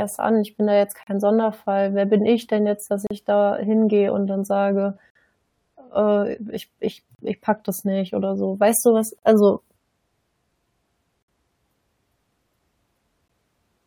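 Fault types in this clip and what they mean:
gap between stream segments: The time stamps of consecutive stream segments, which arrive about every 2 s, leave a small gap at each join, and the player fills it with silence instead of carrying straight on. In this speech, hard-edged holes of about 14 to 57 ms cut in at 1.03, 3.07, 5.10, 7.15, 9.19, 11.23 and 13.28 s, for example between "ich ich" and "ich packe das nicht", but none of the speech is lost.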